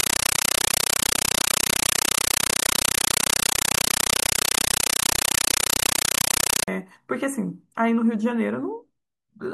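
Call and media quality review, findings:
Compressed stream played as audio, 0.0–6.68 s: loud chattering static replaces the speech, 8 ms noise bursts repeating at 31.25 Hz. Points to an undecoded AC-3 bitstream on the digital link being treated as PCM.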